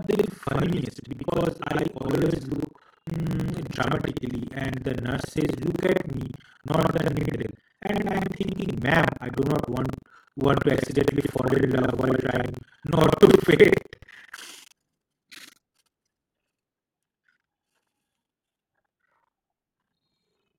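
From start to finish the speech carries a rough, robotic rattle at about 23.4 Hz that sounds only while there is signal. This is buffer tearing: the software filling the playback ring buffer and the hardware reading it have slipped out of step, so they cross inside every period, which fits a 2048-sample buffer. Roughly two-fifths of each buffer replays audio from around a tenth of a second earlier, with hard joins on both sides.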